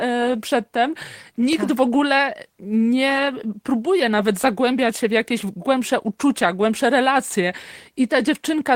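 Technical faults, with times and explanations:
No technical faults turn up anywhere in this speech recording, so there's nothing to list.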